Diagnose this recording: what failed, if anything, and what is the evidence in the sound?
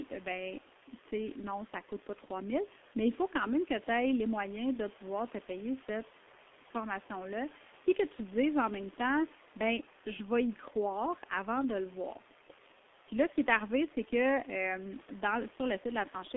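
Throughout, the speech is muffled and hoarse, with smeared consonants and nothing below about 300 Hz or above 3.5 kHz. This is heavy G.723.1 codec damage at the codec stage: its 30 ms frames and slow voice model, at a bitrate that fits about 6 kbit/s, blur fast detail.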